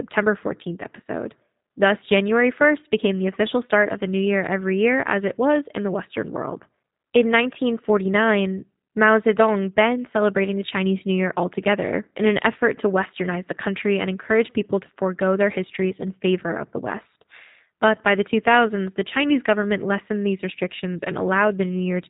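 From start to finish the speech carries G.729 codec damage, and it is plainly audible. Nothing reaches past about 3.8 kHz, yet the result is not a clean band limit: the voice is rebuilt from a vocal tract filter, a pitch predictor and a few pulses per frame, so it sounds rough and faintly synthetic. That reconstructed, buzzy texture, which fits an 8 kbit/s codec, is what separates it from a simple low-pass filter, which would only dull the sound.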